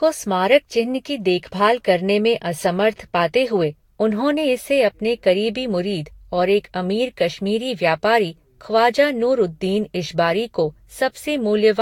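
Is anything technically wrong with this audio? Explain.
Yes, there's generation loss running through the whole speech clip. It sounds swirly and hollow, with smeared consonant attacks, worse than a single encode at this quality would give. Nothing comes through above 19.2 kHz. The likely cause is the audio being decoded and re-encoded with a lossy codec about five times, each pass re-quantising on a shifted frame grid so the noise and spectral holes pile up. The character fits Vorbis at around 66 to 69 kbit/s.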